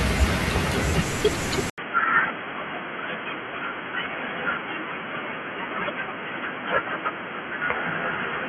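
At 1.70 s the speech drops out for 80 ms, then returns dull, boxy and somewhat quieter, with nothing above 3.3 kHz and a new, faint background noise, all the way to the end at 8.49 s. This is likely an input switched to a poorer device.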